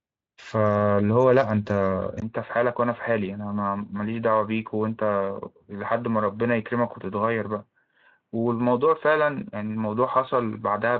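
At 2.20 s the speech drops out for about 20 ms, then returns duller and boxier, a few decibels quieter, with a faint new background hiss, and stays that way to the end. This is likely an input switched to a poorer device. On a spectrogram, energy that reached 7.6 kHz under the light Speex coding stops at 3.8 kHz after the gap. The waveform shows a brief flat notch at 2.20 s and lower peaks afterwards.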